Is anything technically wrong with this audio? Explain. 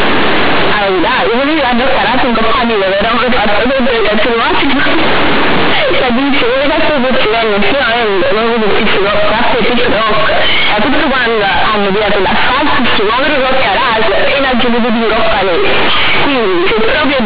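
Yes. Throughout the whole clip the speech comes out very loud and harshly buzzy, with quiet passages blown up to nearly the level of loud ones and heavy noise filling the pauses. This is companded audio read as linear: the mu-law telephone bytes are being played as plain linear 8-bit samples without expansion. Every sign change then throws the output across about half its range, bending the waveform badly, even though the underlying G.711 coding itself still limits the band to 4 kHz as expected.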